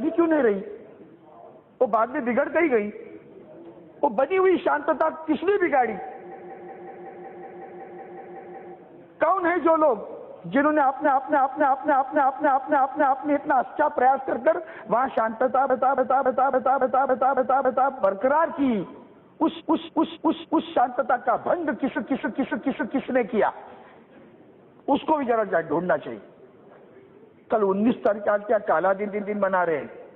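Repeated frames: runs of compressed frames were sent or written more than once, so the decoder replays the same short block in a loop and the audio stutters and lengthens. From 6.27 to 8.69 s a 0.19 s block repeats 13 extra times. A 0.28 s block, which fits about six frames, loops from 11.01 to 13.24 s and from 15.65 to 17.88 s (8 extra plays each), and from 19.56 to 20.67 s and 21.92 to 23.04 s (4 each). A 0.14 s block repeats twice more from 29.03 to 29.31 s.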